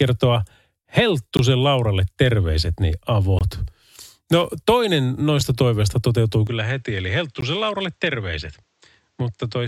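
From 1.37 to 1.39 s, 3.39 to 3.41 s, and at 5.41 s, the speech breaks off in hard-edged holes of about 18, 21 and 5 ms, spaced 2 s apart. This is a gap between stream segments: mistimed joins are filled with silence. Unlike a dropout, nothing is lost; the sound resumes intact, only delayed.

At 6.47 s the input switched to a poorer device, likely a lower-grade microphone or headset. With no silence at the changeover, the speech turns duller, with nothing above 8.3 kHz. It falls about 5 dB in level over a new noise floor roughly 45 dB below it. That combination of narrower band, level and noise together marks a device change rather than simple filtering. The same 2 s segment gap pattern continues at 7.41 s, as a short hole of about 17 ms inside the duller section.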